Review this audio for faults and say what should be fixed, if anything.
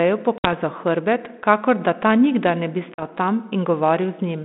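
Packet loss on an ADPCM call: packets went missing and were filled with silence, and the decoder's adaptive predictor and step size then drifted out of step with the sender's. This is heard as hard-edged gaps at 0.38 to 0.47 s (about 60 ms lost, a few packets) and 2.94 to 3.03 s (about 40 ms, a couple of packets). After each gap the speech resumes with brief slight distortion before settling. The underlying telephone-band coding, limited to roughly 200 Hz to 3.6 kHz with light graininess that fits 32 kbit/s G.726, is not the cause. To prevent it, add jitter buffering and packet-loss concealment that also resets or re-syncs the ADPCM decoder state after a loss.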